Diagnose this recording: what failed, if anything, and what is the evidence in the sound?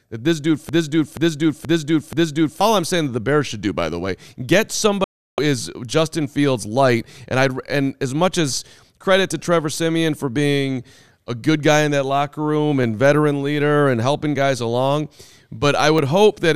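A broken-record loop runs from 0.69 to 2.61 s: a 479 ms fragment of speech repeats exactly, back to back, four times. The likely cause is a stalled player or stream buffer resending its last held block, so the speech due in that span is lost.

A digital broadcast dropout mutes the audio from 5.04 to 5.39 s. The sound fades out over about 3 ms, stays silent for 336 ms, then resumes further along. This is a receiver or decoder stage discarding failed frames, consistent with about fourteen 24 ms frames.

Dropped samples produce single sharp clicks at 12.83 s and 15.98 s, each a thin vertical line across the spectrum. Well under a millisecond of waveform is missing, so no sound is audibly lost. The likely cause is a driver or buffer stage skipping samples.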